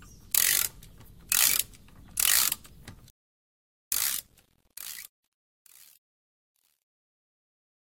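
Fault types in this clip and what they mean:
Truncation distortion on a fade: As the level falls from about 2.86 s to the end at 7.96 s, the fade-out is cut to a coarse word length without dither, which fits a 10-bit stage. Near the quiet end the waveform becomes a few flat square steps and the sound turns gritty. On a spectrogram, hash-like harmonic smearing rises above the fading content, worst at 7.96 s.
Rebuffering stall: From 3.10 to 3.92 s the playback runs dry and halts, adding about 0.82 s of silence before the sound picks up exactly where it left off, with nothing missing. The waveform shows a flat, silent stretch inserted just as the smooth fade-out is getting under way. A spectrogram shows a clean vertical gap across all frequencies, with content on both sides matching seamlessly.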